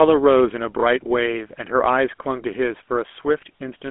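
Throughout, GSM full-rate codec damage is plainly audible: the speech sounds buzzy and gravelly, consistent with the 13 kbps GSM full-rate coding. The spectrogram is empty above 3.8 kHz.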